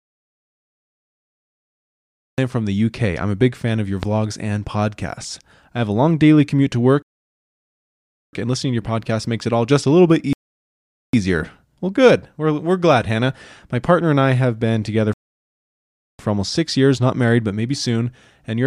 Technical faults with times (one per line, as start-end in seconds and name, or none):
0.00-2.38 audio dropout to silence
4.03-4.05 loud pop
7.02-8.33 rebuffering stall
10.33-11.13 rebuffering stall
15.13-16.19 rebuffering stall